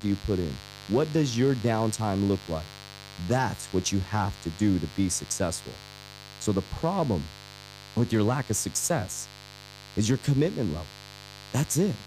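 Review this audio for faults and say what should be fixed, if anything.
Mains buzz runs through the whole speech clip: switching spikes from a dimmer, rectifier or unshielded cable are entering the signal chain twice per 50 Hz cycle, spreading harmonics into the kilohertz range. The result is a steady, raspy buzz sitting roughly 20 dB below the speech. Fix the grounding and shielding, and keep dimmers and switching supplies off the audio circuit.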